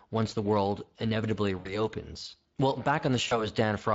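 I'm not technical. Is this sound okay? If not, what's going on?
No. Speex codec damage runs through the whole clip: the speech was squeezed into too little data, so it sounds rough, hoarse and noisy throughout.

VoIP packet loss concealed by the speech codec occurs at 1.59 to 1.87 s and 3.27 to 3.51 s. About 60 ms and then 40 ms of sound went missing. The decoder stretched the last sound into a fading buzz or noise, and the speech stays distorted briefly afterwards.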